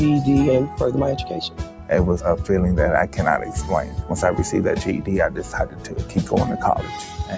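Throughout the clip a speech noise suppressor is left running on sound it was never meant for. It treats sustained tones and ambience as noise and swings its loss by around 10 dB, so held material pumps and thins while attacks stay intact. That attack-preserving pattern tells it apart from compressor pumping, which ducks after loud hits. The call microphone processing also holds the audio below 8 kHz.

The same suppressor cuts particular sounds harder at three points. From 1.49 to 1.89 s the level sinks by about 7 dB, from 3.86 to 4.05 s by about 5 dB, and from 5.66 to 6.16 s by about 7 dB. These are softened sounds rather than true dropouts, because the sound never goes fully silent.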